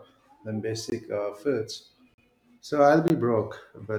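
A block of digital silence appears at 0.90 to 0.92 s, just before "uh foods", again at 2.14 to 2.18 s, right after "uh foods", and at 3.08 to 3.10 s. In each, the speech drops to silence and returns with no fade, as when the output buffer isn't filled in time. The two 20 ms gaps are heard as short holes, and the 40 ms one as a brief hole in the speech.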